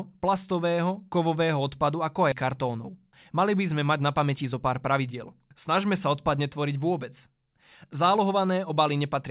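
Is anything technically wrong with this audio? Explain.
Yes, there are two kinds of problem in this speech clip, heard through a narrowband call path with nothing above 4 kHz, which fits a G.711 mu-law codec.

At 2.32 to 2.34 s there is a skip ahead. The speech lurches forward abruptly, with no silence or fill, as though about a second has vanished and the two sides are spliced together. This happens when a stretch of audio is discarded, either lost in transit or thrown out by an overflowing jitter buffer, while later audio is already queued. Playback then jumps straight to it, cutting the delay by roughly the same second.

From 2.88 to 3.32 s, and again from 4.26 to 5.40 s, there is a jitter buffer speed-up. The speech sounds rushed but keeps its pitch. It runs at 111% in the first stretch and 107% in the second. The receiver's buffer was holding more audio than its target, so it trimmed many tiny pitch-period-length pieces in succession to catch up. 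This shaved off around 50 ms in the first passage and around 100 ms in the second.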